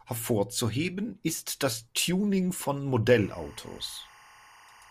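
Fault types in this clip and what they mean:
Timecode bleed: linear timecode leaking into the speech from about 3.10 s to the end, a chirping warble alternating near 1 kHz and 2 kHz, roughly 25 dB below the voice, consistent with 24-frame code. The two-pitch switching distinguishes it from a steady single-tone whine.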